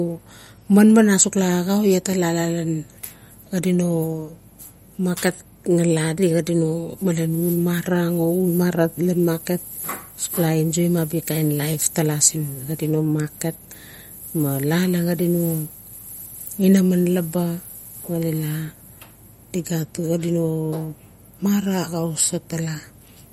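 Throughout the clip, the speech has likely been through heavy MP3 compression at a low bitrate, the kind that fits roughly 48 kbps. Starved of bits, the encoder removed everything above 15.9 kHz and let weak frequency lines flicker on and off, giving the voice a plainly watery, swirling texture with chirpy s sounds.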